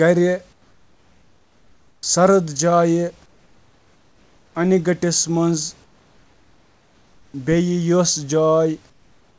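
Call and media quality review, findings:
Comfort noise in place of the background, 0.53–2.03 s, 3.26–4.55 s, 5.84–7.34 s, 8.90 s to end. Real room noise in the pauses gives way to steady, featureless hiss about 5–6 dB quieter, likely sender-side discontinuous transmission with receiver-generated noise filling each gap.

Onset clipped by the voice detector, 2.01 s. First 20 ms of sound missing, entry abrupt with no soft attack, comfort noise running right up to it. The sender's voice detector likely reacted late, so the opening frame was never transmitted.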